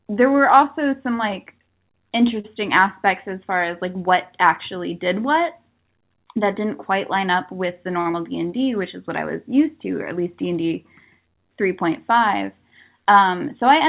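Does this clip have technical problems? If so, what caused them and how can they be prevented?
Yes. At 2.40 to 2.46 s a packet arrived late and the jitter buffer ran empty, causing a short stall from a late packet. The receiver held the last sound for 39 ms and then resumed where it left off, so nothing is lost, but one sound is drawn out with a slight buzz or dip. The same happens at 8.01 to 8.07 s, with a 46 ms hold. A deeper or adaptive jitter buffer, plus steadier packet pacing from the sender, would absorb delays of this size.

At 8.11 to 8.15 s, 40 ms of audio never reached the decoder in time, a short concealed packet loss. The receiver bridged the gap with 16 ms of sound extrapolated from what came before, and the buffer caught up by around 20 ms. This is heard as a brief smear where part of the sound is missing. Forward error correction or redundant packets on the link would let the receiver rebuild lost audio instead of guessing at it.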